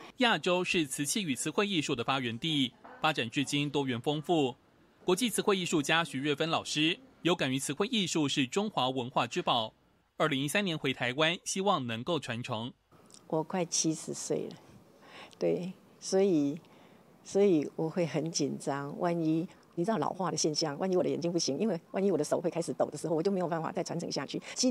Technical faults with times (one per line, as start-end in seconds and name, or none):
19.43-24.70 time-stretched section